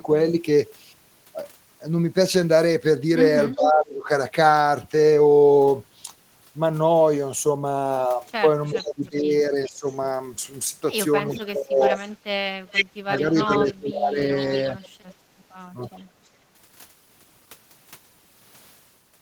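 A far-end echo canceller likely failed to remove its loudspeaker pickup, so echo leak returns a copy of the speech about 0.4 s late. It is barely audible at 3.52–3.57 s, far louder at 8.66–9.93 s and 11.29–14.89 s, and faint again at 15.91–16.01 s. Meanwhile, speech suppressed in double talk likely comes from the canceller mistaking overlapping talk for echo and turning it down. The speech dips by about 20 dB at 3.55–4.1 s and 8.73–9.87 s, and by about 30 dB at 11.48–15.23 s, losing stretches in pieces.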